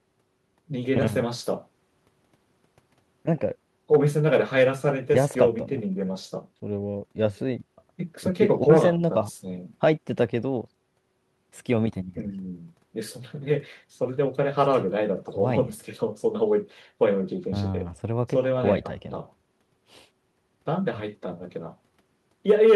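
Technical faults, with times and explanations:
No technical faults heard.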